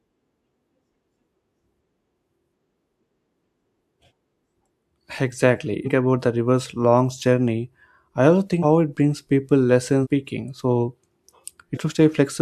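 Speech with compressed frames skipped at 5.84, 8.62, 10.03 and 11.73 s. Each jump drops roughly a third to half a second, in steps that fit a 42.7 ms frame, such as the one before "it brings people".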